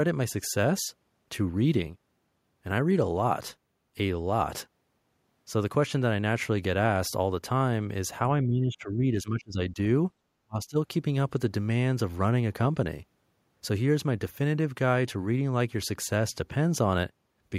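From 8.43 to 9.78 s the speech sinks by roughly 15 dB for about a second in total, then from 10.45 to 10.77 s it nearly vanishes, falling around 35 dB. This pattern is likely speech suppressed in double talk: an echo canceller, unable to separate this talker from the far side's loudspeaker echo, turned the signal down.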